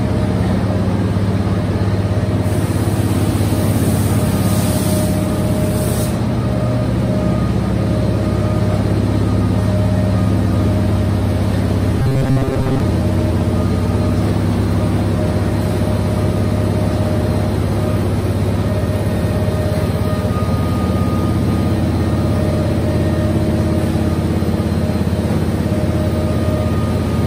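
From 12.00 to 12.80 s, the sound becomes a rigid, metallic buzz near 133 Hz. This is robotic sound, likely from repeated short buffers of about 7.5 ms.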